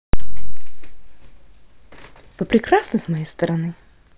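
Speech recording, no technical faults detected anywhere in the audio.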